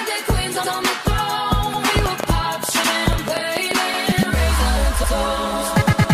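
At 0.64 s there's the first of a run of overlapping chunks. The audio seems to have been handled in 1-second blocks, and each block starts 100 ms before the previous one ended, so that slice plays twice. You hear it as a small stutter or click at each join: 0.64, 1.74, 2.84, 3.94 and 5.04 s. The steady one-second spacing is the giveaway that it's block processing and not something in the source.

From 1.99 to 3.72 s a train of clicks sits on top of that, roughly ten sharp pops at about 6 per second but spaced unevenly, peaking at something like 15 dB above the sound itself. They're similar in shape and keep ticking through the quieter moments too. That pattern most likely comes from electrical interference from nearby gear or a faulty connection or power supply.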